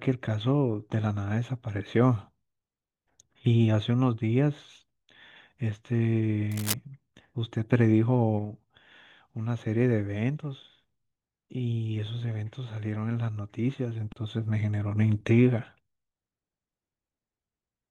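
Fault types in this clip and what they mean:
Cable scratch noise: dense, uneven scratching over the speech from 6.51 to 6.75 s, likely a worn connector moving; a brief rustle, not separate clicks.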